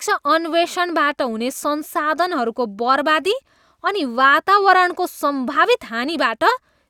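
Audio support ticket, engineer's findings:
Listened through the speech recording and found nothing to flag, no dropouts, clicks or distortion, so no component to chase here.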